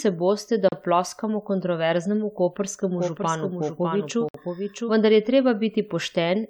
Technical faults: gap at a join of encoded pieces; doubled audio track

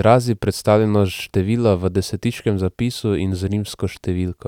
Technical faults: none

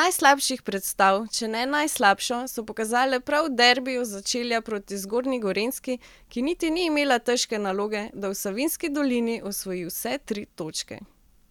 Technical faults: none

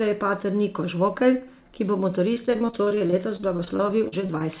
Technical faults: repeated packet loss (robotic sound)

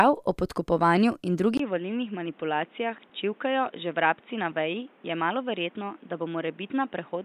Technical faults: input switched to a poorer device; lost LE Audio frames

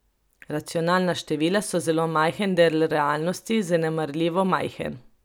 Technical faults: none

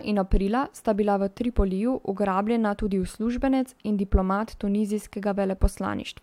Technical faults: none

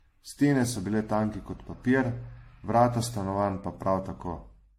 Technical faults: generation loss

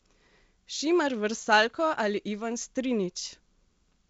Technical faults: none

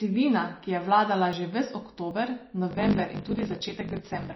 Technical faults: MP3 compression; dropped buffer (overrun); block size mismatch (truncated)

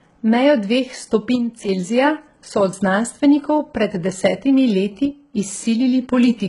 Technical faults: HE-AAC compression; one channel drops out

